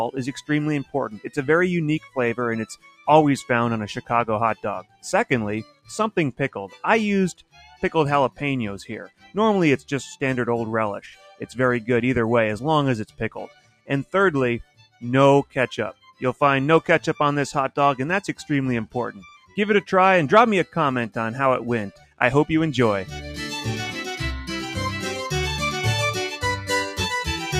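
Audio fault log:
Throughout, noise suppressor applied to music or sounds: the level pumps and thins by roughly 10 dB, because steady parts and tails are treated as noise and turned down.
0.39–3.07 s, 4.01–9.9 s, 13.06–16.22 s, 18.41–19.57 s, 21.92–22.2 s, sound cut by the noise suppressor: sustained passages sink by about 16 to 18 dB and decays end early, because the suppressor treats them as noise.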